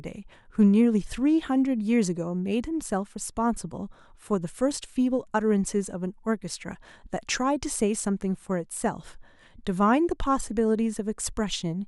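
At 0.61 to 0.65 s there is a brief burst of hard clipping: the speech peak overshoots the stage's limit by about 1 dB, so the waveform tops are cut flat. The flattening adds high harmonics, heard as a short crackle on that peak.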